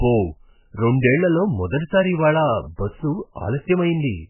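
MP3 compression artefacts run through the whole clip, from start to finish. The speech is bandlimited, with nothing above 3 kHz, and its damage is heavy. The likely cause is MP3 encoding at a very low bitrate, with the sound pointing to something around 8 kbps. Starved of bits, the encoder cuts the treble at that fixed point and discards weak spectral detail frame by frame, leaving the speech dull, watery and swirly.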